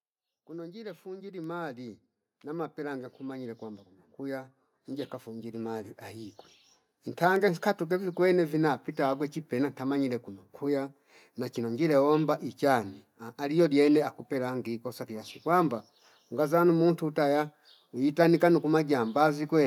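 From about 0.47 s to 6.01 s there's automatic gain rising. The gain control decided the input was too quiet and slowly cranked itself up, by about 19 dB over those five and a half seconds. Because it's applied to the whole signal, the speech and the room noise behind it swell together, so you hear the background creep up right along with the voice rather than the talker simply getting louder.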